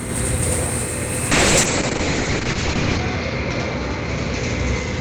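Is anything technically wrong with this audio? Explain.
Yes, there are two faults.

A channel delay (doubling) runs through the whole clip. One channel arrives about 93 ms late, which fits a 4096-sample buffer. When the channels are summed to mono, the late copy stands apart. Every sound is followed by an equally loud slap echo.

A call bitrate drop begins at 1.33 s and lasts to the end. The encoder's budget falls from 32 kbps to 7 kbps and stays at its lowest for 1.66 s. Coding becomes coarse, and the bandwidth narrows from 20 kHz to 8 kHz. The sound turns rough and muffled.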